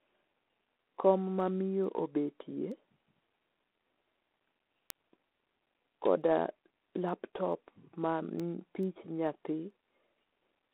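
Speech runs through a G.726 ADPCM coder for the whole clip. The line passes only about 250 Hz to 3.4 kHz, and nothing is heard above 3.8 kHz. A harsh, rasping hiss rides on the speech and rises and falls with its level. That grain comes from coding each sample as a few bits of difference from an adaptive prediction. The coarse steps fit the 24 kbit/s mode, and the damage is plainly audible. Word clock ticks also run from 0.53 s to 10.58 s. They come at a steady rate of roughly one every 0.4 s, about twenty in all. They are sharp and of uneven strength. The receiving device is running on its own clock, not locked to the sender's. The two clocks drift apart by roughly 50 parts per million. Each time they slip past each other, a single sample is dropped or repeated, and a tick is heard.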